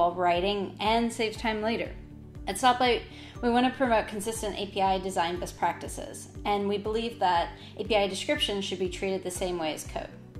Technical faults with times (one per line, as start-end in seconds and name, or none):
none